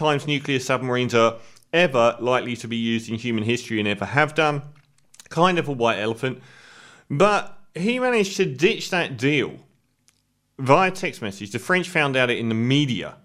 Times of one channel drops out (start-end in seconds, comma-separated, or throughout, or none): none